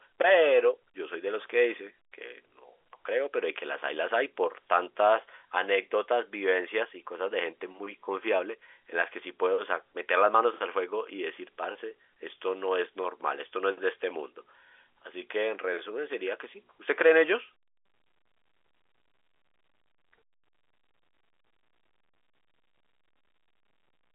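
No technical faults can be heard anywhere in this recording.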